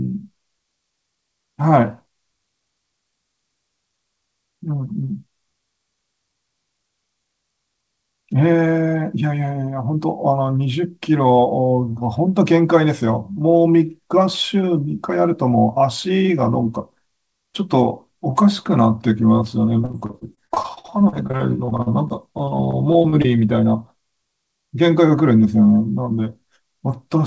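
From 19.82 to 23.26 s the speech breaks up with repeated packet loss, giving a robotic sound. Dozens of short holes, none longer than about 53 ms, are patched by stretching the preceding sound, so about a fifth of the stretch turns choppy. Unlike a single dropout, the damage recurs rapidly.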